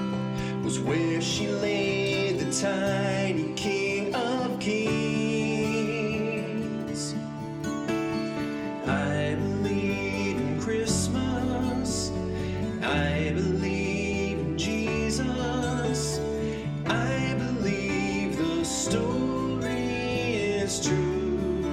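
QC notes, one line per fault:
No faults were found in this clip. Nothing needs to be logged.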